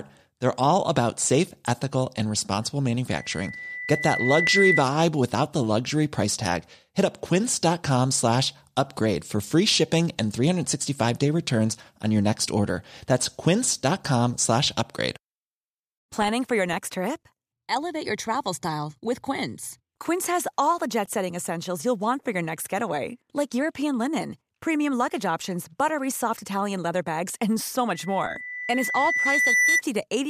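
Loudspeaker feedback squeal appears from 3.10 to 4.86 s, and again from 27.94 to 29.82 s. A microphone is picking up its own loudspeaker. The loop gain passes unity at 2 kHz. That tone swells over about a second and a half. It ends roughly 5 dB above the speech.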